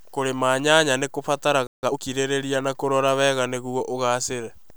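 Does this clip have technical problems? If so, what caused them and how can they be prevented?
Yes. Right after "nyanya nĩ", at 1.67 s, the speech is cut by a playback stall: the output goes silent for 160 ms and then picks up where it stopped, until 1.83 s. Nothing is skipped, which sets it apart from a dropout that drops a piece of the signal. The likely cause is a player whose buffer ran dry or whose audio thread was briefly blocked. A larger playback buffer and a high-priority audio thread that never waits on disk or network work prevent it.

From 1.83 s to 1.99 s comes time-compressed catch-up, as the player clears its backlog by running the speech at about twice its normal speed. It does this by cutting out short pieces and cross-fading across the joins, so the pitch stays where it was while the speech sounds hurried. That unchanged pitch sets it apart from a plain speed-up, which would raise the voice like a tape run fast. 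Preventing the stall removes the need for this catch-up.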